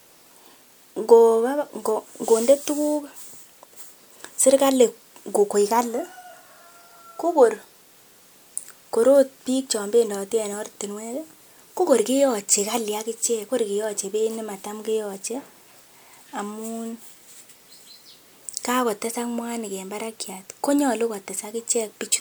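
No technical faults are audible.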